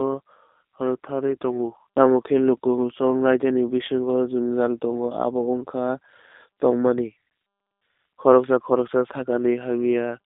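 G.729 codec damage runs through the whole clip, from start to finish. The speech sounds consistent with a low-rate VoIP codec around 8 kbit/s. Rather than storing the waveform, it reconstructs each short frame from a vocal tract filter, a pitch predictor and a few pulses. The line band sits between about 250 Hz and 3.7 kHz, so everything above is cut away. The result is plainly audible: a thin, slightly rough, synthetic buzz on the speech.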